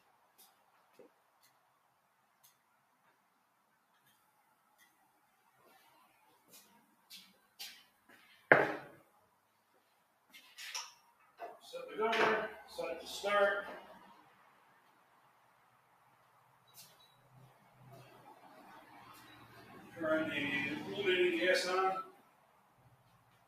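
A noise suppressor applied to music or sounds acts throughout, treating steady tones and tails as noise, so level swings by roughly 20 dB and the audio pumps. Sound cut by the noise suppressor, dropping about 5 dB, occurs at 0.0–0.38, 0.54–4.0, 9.31–10.29, 14.3–16.67, 22.24–22.81 and 22.99–23.48 s, with sustained material sinking.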